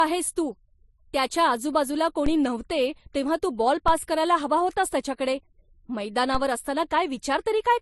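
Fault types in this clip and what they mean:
Transcoding between lossy codecs: The top end stops dead at about 11.9 kHz, and two different flavours of artefact sit on top of each other. That mix is most likely from an MP3 encode at a low rate, around 43 kbit/s, being re-encoded to Vorbis at a similar rate. The second codec wasted bits reproducing the first one's damage, and the low cut-off carried straight through.
DC step: The waveform's zero line suddenly jumps, heard as a dull low thump while the speech carries on underneath untouched. It happens three times, at 2.26 s between "त्याच्या आजूबाजूला" and "नव्हते तेव्हा तू", at 3.88 s just before "करायला हवा होतास त्याच्याकडे", and at 6.35 s. Each offset doesn't hold. It bleeds away the way a 5 Hz high-pass would drain it.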